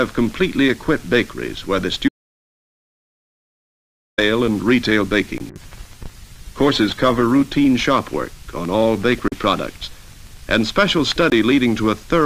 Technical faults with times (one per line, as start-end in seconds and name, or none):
2.08-4.18 audio dropout to silence
5.38-5.40 block of digital silence
5.51-7.65 call bitrate drop
9.28-9.32 block of digital silence
11.30 block of digital silence